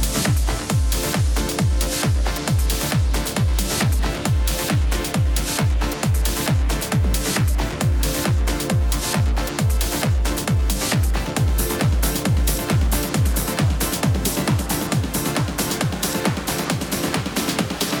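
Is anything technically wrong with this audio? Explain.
No, nothing technically wrong can be heard here.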